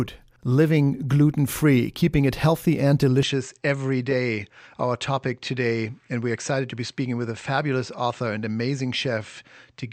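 Speech, and right after "keeping it healthy and", at 3.23 s, the sound abruptly narrows with nothing above 8.4 kHz, drops roughly 5 dB and picks up a faint new noise floor, with no gap, through to the end. That's likely the input switched to a poorer device.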